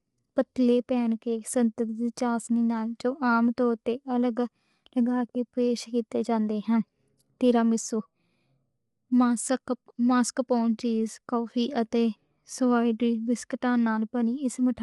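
Speech. Throughout, it sounds rough and grainy, with noise between harmonics and nothing above 11.6 kHz. The likely cause is low-delay AAC compression, whose short frames blur pitch at a low bitrate near 32 kbps.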